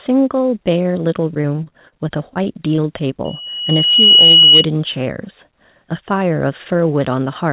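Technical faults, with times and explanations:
1.34–1.94 s and 2.30–2.80 s, repeated packet loss (robotic sound): The speech turns choppy and robotic. Audio keeps dropping out in short holes, the longest about 37 ms and 21 ms. Each hole is patched by stretching the previous sound, so the patched sound repeats and buzzes where the real sound is missing.
3.25–4.66 s, loudspeaker feedback squeal: A steady tone at 2.9 kHz swells over about a second into a squeal, ending roughly 10 dB above the speech. A microphone is picking up its own loudspeaker. At that frequency the loop gain exceeds one, so the tone feeds itself.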